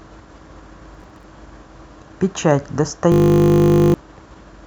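From 0.95 to 1.24 s, processor overload crackle: roughly ten buffers of a few milliseconds each missed their deadlines, leaving silent gaps heard as gritty crackle. From 3.12 to 3.94 s, a system hang loop repeats one 20 ms segment dozens of times, giving a steady 50 Hz buzz while roughly 0.7 s of speech is lost.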